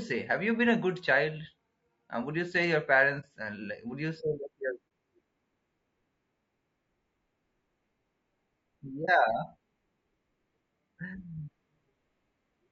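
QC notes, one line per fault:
Throughout: low-delay AAC compression. The speech sounds rough and grainy, with noise filling the gaps between harmonics and a thin, synthetic-sounding top band. This is likely AAC-ELD at roughly 32 kbps, whose short frames resolve pitch harmonics poorly.
3.20–3.25 s (just after "would you say your"), 4.88–4.91 s, 9.05–9.09 s: AAC frame loss with muting. Each event is a gap of about 30 ms where one frame's spectrum was zeroed. The overlapping windows fade the sound out and back in, leaving a brief dip, unlike a hard dropout.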